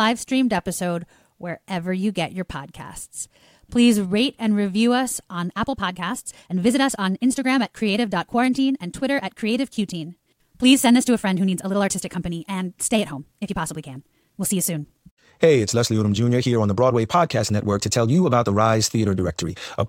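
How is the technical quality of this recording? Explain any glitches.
The recording has one fault. From 5.45 s to the end, it is a time-stretched section. The speech suddenly runs about 1.51 times faster. Pitch holds steady. Short pieces were likely dropped to shorten it. It sounds rushed.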